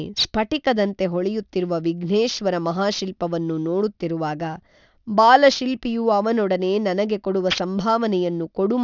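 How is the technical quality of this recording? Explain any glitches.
The recording has one clear fault, and it runs the whole way through. Aliasing is present from start to finish. The speech appears to have been resampled to a much lower rate without an anti-aliasing filter, which points to roughly 12 kHz. Energy above 6 kHz folds back below it. Sibilants turn gritty and metallic, and the spectrum runs hard up to the band edge. The false tones sit only about 15 dB under the speech.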